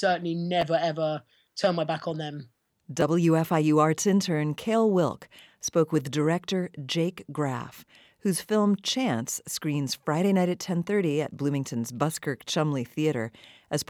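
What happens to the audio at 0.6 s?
At 0.62 s, just before "ever turn my back", audio arrived late and the device played its last buffer one extra time: a repeated buffer. That 12 ms piece, fitting a 512-sample buffer, sounds twice with a hard join, a brief click, losing about 10 ms.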